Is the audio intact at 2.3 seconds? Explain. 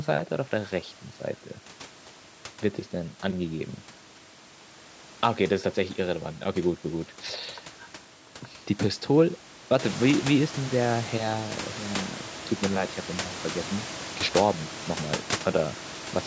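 Yes, the audio at 2.3 seconds is intact, with no fault at that moment.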